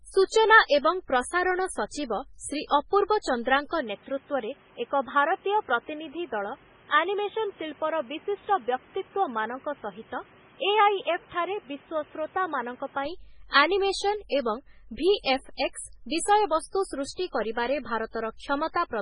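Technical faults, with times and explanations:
Throughout: heavy MP3 compression damage is likely; weak spectral lines flicker, giving a watery sound, with nothing above 10.6 kHz, which fits a very low bitrate near 16 kbps.
3.80–13.05 s: input switched to a poorer device, likely; the band narrows to nothing above 3.8 kHz, and new noise appears roughly 30 dB below the signal, without a gap or level change.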